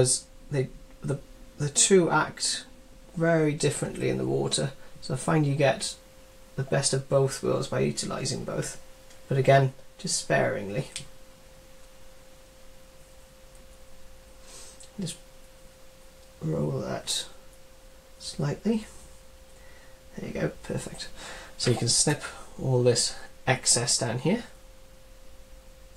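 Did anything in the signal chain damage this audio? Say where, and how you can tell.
No, nothing along the chain from capture to playback has left an audible mark on this audio. Listening through, no stage shows any disturbance in the sound.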